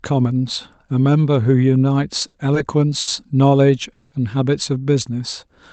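A speech recording that came through a call codec, Opus by the sound of it, with the top end stopping around 8 kHz. There are two short stalls from a late packet, at 2.27 to 2.37 s and 3.00 to 3.10 s. Each time the jitter buffer ran dry, so the last bit of sound gets stretched for about 70 ms until the packet shows up, then picks up right where it left off. Nothing's lost, but you hear a slightly buzzy hold. Then from 3.93 to 4.15 s there's a call audio freeze. The sound is carried on as a fading buzz for about 190 ms and never drops to silence, then resumes with nothing missing, so it's effectively a gap pushed into the audio. That's likely packets held up in transit long enough to empty the buffer.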